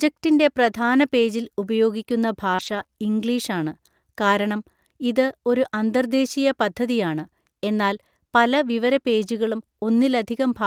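At 0.65 to 0.67 s the speech turns briefly rougher and noisier without any gap, a lost packet rebuilt from error correction: one 20 ms packet went missing, and the decoder played the low-bitrate copy carried in the following packet.

From 2.55 to 2.92 s the speech becomes choppy, repeated packet loss with a robotic sound. Three holes, the longest 31 ms, were patched by stretching the preceding sound, covering about 18% of the span and leaving roughly 80 ms missing.

The same brief roughening returns at 7.64 to 7.66 s and 9.26 to 9.28 s, each again a single 20 ms packet rebuilt from its error-correction copy.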